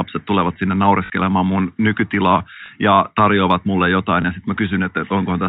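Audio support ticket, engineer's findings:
Packet loss with last packet repeated: short robotic stutter at 1.06–1.10 s (40 ms, sounds like two 20 ms packets), small blips at 2.66–2.68 s and 4.22–4.24 s. Jitter buffer concealment replays the previous packet. Narrowband telephone coding underneath sounds fine.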